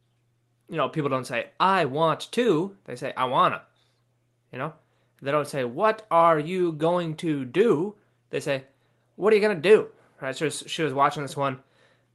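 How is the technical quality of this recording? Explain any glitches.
No glitches can be heard in the speech, which comes through a call link whose top end stops around 12 kHz, consistent with Opus at a moderate bitrate.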